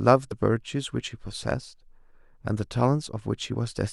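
The decoder skipped compressed frames twice, with whole blocks of the coded stream either missing or rejected as damaged, and playback jumping forward by whole frames of about 23.2 ms. At 0.30 s the speech leaps ahead by roughly 50 ms, which fits a couple of lost frames. From 3.53 to 3.55 s a shorter jump of about 20 ms points to a single frame.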